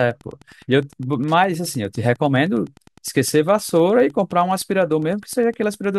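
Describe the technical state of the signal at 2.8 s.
At 2.8 s, Wi-Fi interference is present, as it is across the whole speech clip. A nearby radio's beacon is rectified, giving a faint tick every 102.4 ms, well below the speech.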